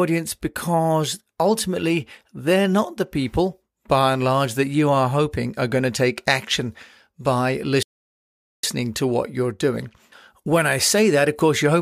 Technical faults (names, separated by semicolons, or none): playback stall